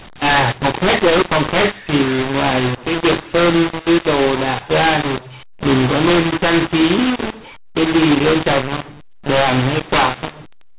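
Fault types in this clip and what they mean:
mu-law and A-law mixed up: mu-law samples are decoded as A-law throughout, scrambling levels, so the speech sounds harsh and distorted and pauses fill with noise.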